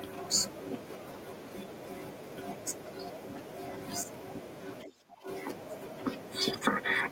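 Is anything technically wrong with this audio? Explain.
Yes. From 4.84 to 5.27 s the speech dips by roughly 25 dB: speech suppressed in double talk, likely an echo canceller unable to separate near-end speech from far-end echo.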